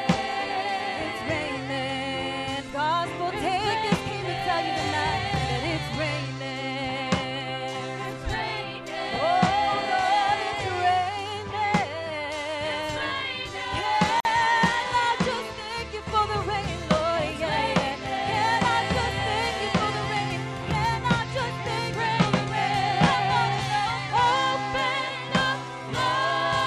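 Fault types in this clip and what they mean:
Overlapping chunks: each 10 s chunk starts slightly before the previous one ends, so 7 ms of audio plays twice, heard as brief clicks at 9.16 s and 19.21 s. The waveform shows a tiny repeated fragment with a step, and the spectrogram shows a thin vertical broadband line.
Gap at a join of encoded pieces: separately encoded pieces were joined without trimming the encoder's start delay and end padding, leaving a 48 ms silence from 14.20 to 14.25 s. The waveform fades quickly to flat, and the spectrogram shows a narrow empty column with slightly smeared edges.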